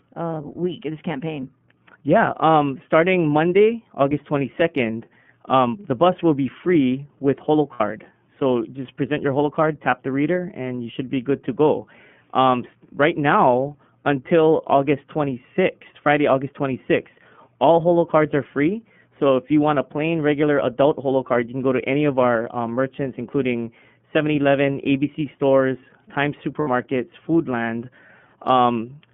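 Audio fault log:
throughout: iLBC codec. The sound is band-limited to 150 Hz to 3.4 kHz and is plainly rough and synthetic, which fits the 13.33 kbps, 30 ms frame mode.
7.73–7.81 s and 26.60–26.68 s: lost iLBC frames. Each 60 ms gap becomes a held, buzzy repeated pitch cycle, which fits two lost frames. The voice returns immediately afterwards.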